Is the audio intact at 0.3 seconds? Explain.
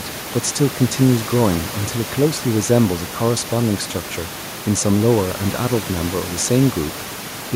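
Yes, the audio is intact at 0.3 seconds; the only thing audible beneath the speech is the room's own background noise, about 16 dB lower, which belongs to the recording rather than being a fault.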